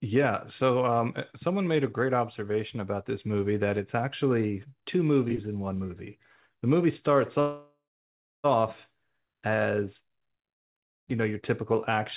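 At 7.4 s, packets on the call were likely held up in transit, so the receiver's jitter buffer ran empty and it stretched the last sound to cover the wait. The result is a call audio freeze lasting until 8.46 s, about 1.04 s in all. The stretched sound fades out, leaving roughly 0.6 s of silence, and then the speech resumes exactly where it stopped, with nothing lost, only delayed. Throughout the clip nothing reaches above 4 kHz, which fits a G.711 narrowband call codec.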